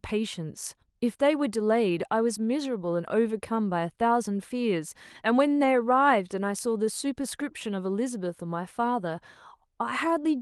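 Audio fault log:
1.89, 3.55, 5.63, 7.89 and 9.05 s: lost packet rebuilt from error correction. Each 20 ms patch, pointing to one lost packet, is played from the coarse backup copy in the next Opus packet. There is no gap, but each moment sounds briefly rougher and noisier.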